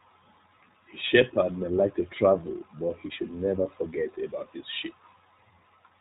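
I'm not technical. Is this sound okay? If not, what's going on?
No, the iLBC codec is audibly damaging the speech for the whole clip, from start to finish. This is a phone-line style compressor that cuts the sound into 20 ms slices and rebuilds each one on its own, without borrowing from the slice before. Everything above 4 kHz is thrown away, so the voice sounds muffled and boxed in, and the rebuilt slices leave it slightly rough and artificial, like a cheap internet call.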